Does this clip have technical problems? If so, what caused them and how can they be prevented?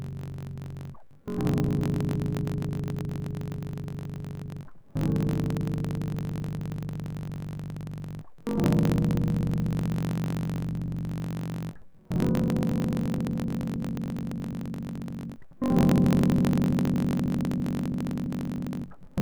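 Yes. A block size mismatch (truncated) runs throughout the music: each block's tail is discarded, giving a 46.9 Hz buzz, consistent with 1024-sample reads, and playback 1.12 times faster at near-normal pitch. Prevent it by making every stage write and read the same block size.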